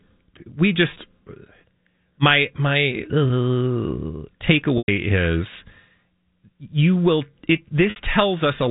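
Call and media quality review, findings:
Packet loss with pitch repetition at 0.94–0.96 s, 3.28–3.30 s (after "my my"), 4.78–4.88 s and 7.90–7.96 s. The two 20 ms gaps are brief buzzy holds. The 60 ms gap after "you will it" audibly decays. The 100 ms gap fades to silence before speech cross-fades back in. The lost spans fit 20 ms packets. Jitter buffer concealment loops the last pitch period. Spectrogram shows flat, repeated harmonic striations. Waveform shows identical periodic cycles tapering in amplitude. The G.711 band limit holds at 4 kHz.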